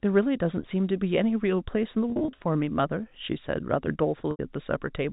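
From 2.1 to 2.44 s, packet loss with pitch repetition breaks up the speech. About 180 ms is missing, scattered across 340 ms in gaps no longer than 40 ms, which fits small packets of around 10 ms. At 4.31 to 4.39 s, a further 80 ms drops out. Each gap is filled by looping the last pitch period. The short gaps in the first stretch sound like a briefly held, buzzy tone rather than the silence or click of a plain dropout, while the longer second gap fades into silence before the speech returns with a short cross-fade. All of this sits within the under-4 kHz telephone band of G.711.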